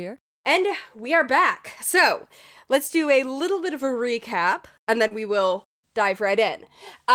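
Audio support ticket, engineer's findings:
Brief smear at 5.07–5.14 s, after "of a recap and". Short concealed packet loss: 40 ms missing, receiver extended preceding sound to bridge gap, then blended back.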